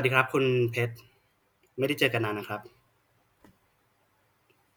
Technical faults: none

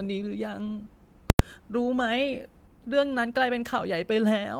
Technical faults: invalid numbers at full scale

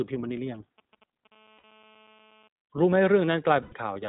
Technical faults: iLBC codec; GSM signalling bursts; GSM phone buzz; lost iLBC frames

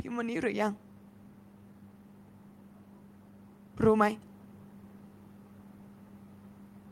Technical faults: automatic gain rising

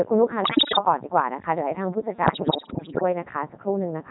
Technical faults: Codec 2 vocoder; bit errors on digital voice radio

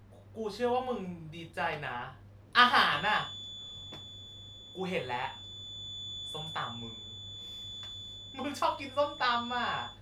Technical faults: feedback whistle

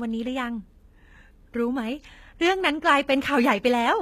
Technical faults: HE-AAC compression

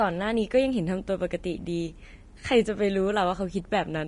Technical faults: Vorbis compression

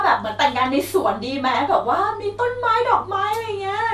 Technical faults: MP2 compression

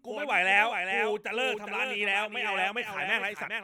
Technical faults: doubled audio track

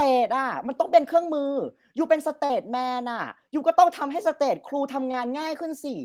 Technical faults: short concealed packet loss

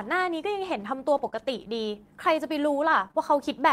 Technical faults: scattered short gaps

